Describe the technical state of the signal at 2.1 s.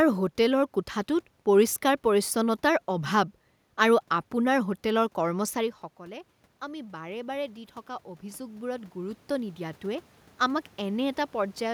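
At 2.1 s the signal is intact, with no system fault, and the background noise is just the room the microphone was in.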